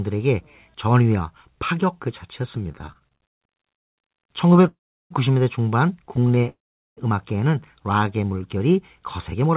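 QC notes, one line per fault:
2.72–3.43 s, 4.53–4.69 s and 6.16–6.47 s, repeated stalls (stutter). The sound keeps catching and dragging. The first run has about ten hitches, the longest near 130 ms, and filler covers about 41% of it. The later two have brief catches of 12 to 16 ms, with about a quarter of each run filled. Packets reached the receiver slower than playback. The buffer kept emptying, and the last sound was stretched to cover each gap. Nothing is missing, only delayed.
3.75–3.99 s, 4.69–5.12 s and 6.49–6.99 s, call audio freeze. The audio stalls for 0.22 s, 0.43 s and 0.5 s. Nearly all of each stop is silence. Playback then resumes exactly where it left off, so nothing is lost and each freeze adds delay. The likely cause is packets held up in transit, leaving the jitter buffer empty. In the band-limited audio around these faults, nothing is heard above 4 kHz, which fits a G.711-type call codec.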